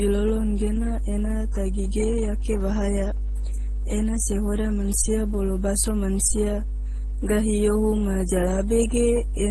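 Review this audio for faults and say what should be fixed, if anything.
A steady 50 Hz mains hum runs through the whole speech clip, about as loud as the speech itself. A ground loop or nearby transformer is feeding the power line into the signal. Break the ground loop, or move the cable away from transformers.

Transcoding between lossy codecs is the likely cause of mixed codec artefacts heard together throughout. Nothing is present above 15.6 kHz. The sound points to a low-rate MP3 followed by a low-rate Opus encode, with each stage adding damage. Encode once, from the original source.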